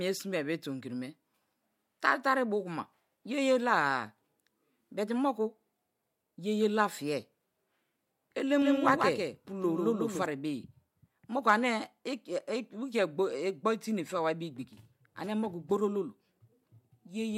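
A doubled audio track runs from 8.62 to 10.26 s: a second copy of the speech, about 5 dB quieter, trails roughly 150 ms behind, likely from a slower capture path.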